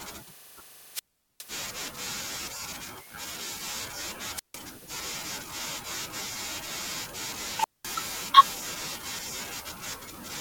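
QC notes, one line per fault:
0.94–1.44 s, 4.35–4.57 s, 7.59–7.88 s: wireless microphone squelch dropout. The fading radio link raises hiss until squelch mutes for 0.41, 0.15 and 0.21 s. On a spectrogram each shows as a broadband haze followed by a blank gap, and on the waveform as a flat line.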